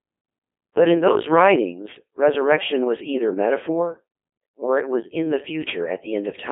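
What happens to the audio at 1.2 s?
At 1.2 s the speech is under Codec 2 vocoder damage, which spans the whole clip. The voice is rebuilt from sine waves, sounding robotic and buzzy, with nothing above 3.5 kHz.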